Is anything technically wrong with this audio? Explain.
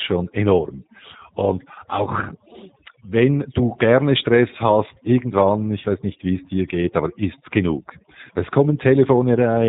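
Yes, two faults run through the whole speech clip.

Overdone noise removal: throughout, bands near the estimated noise floor are pulled down hard, taking quiet speech detail with them. The background drops and breaks up into twinkling specks. A spectrogram shows scattered isolated dots between phrases and holes eaten into the harmonics.

G.729 codec: throughout, the speech is rebuilt from a vocal tract filter, pitch predictor and a few pulses per frame. The damage is plainly audible as a rough, synthetic edge, consistent with an 8 kbit/s G.729A stream. The spectrogram shows nothing above 3.8 kHz, a flat empty band overhead.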